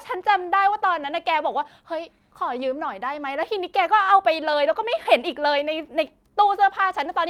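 Clock drift between sender and receiver runs throughout: the sender's clock is running about 2% slow, so the receiver's buffer keeps draining. Repeated timing corrections from 0.16 to 7.10 s repeat short slices at uneven intervals, slowing speech to 98% and adding roughly 150 ms, heard as faint hiccups.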